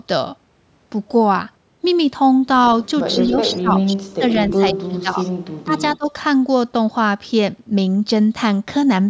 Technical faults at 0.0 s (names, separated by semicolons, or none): none